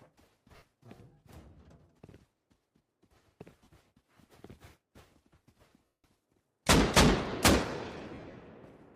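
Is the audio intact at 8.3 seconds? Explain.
No. From 8.10 to 8.34 s the sound breaks into a hissy, grainy smear where tonal detail is washed out into noise, in short bursts rather than one gap. These are lost LE Audio frames: about 140 ms of audio went missing, scattered across that 240 ms stretch in runs of up to roughly 50 ms. For each gap, the LC3 decoder filled in by repeating the last good spectrum with randomised signs, which destroys pitch and leaves noise.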